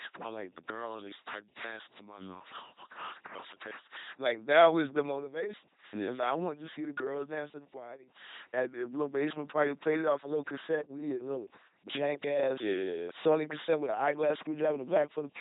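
From start to end, the speech passes through an LPC-10 vocoder. Each moment is rebuilt as either buzz or hiss through a simple vocal tract filter. The damage is heavy. The speech sounds robotic and buzzy, with wrong-voicing buzzes. Nothing remains above 3.8 kHz, which fits a 2.4 kbit/s stream.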